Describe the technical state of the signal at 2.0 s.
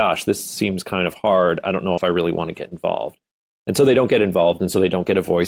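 Just before 2.0 s, the speech carries a short concealed packet loss from 1.93 to 1.99 s, between "hard i don't know" and "i really want to". About 40 ms of audio never arrived in time. The receiver bridged the gap by extending the last sound it had, then faded back into the real signal. The result is a brief smear across that span, heard as a wobble.

Overlapping the end of that span, 1.97 to 1.99 s holds a lost packet rebuilt from error correction. This 20 ms stretch, which fits a single lost packet, was played from the low-bitrate backup copy carried in the following packet. So there is no silence here. The rebuilt audio sounds rougher and grainier than the surrounding speech, just before the return at "i really want to".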